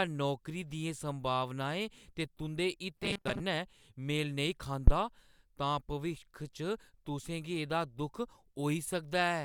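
Robotic sound from repeated short buffers runs from 2.97 to 3.40 s in this speech clip. The voice collapses into a stiff, metallic buzz pitched at 200 Hz, loosely tracking the speech while about half of the real audio seems to be missing. The likely cause is fresh audio arriving too late, so the playback fills the gaps by looping the last chunk. A 200 Hz buzz fits a loop about 5 ms long. A phantom power thump follows from 4.88 to 4.93 s, a low thud that dies away in about 12 ms. It comes from a supply being switched on a live input, which sends a voltage step through the coupling capacitors.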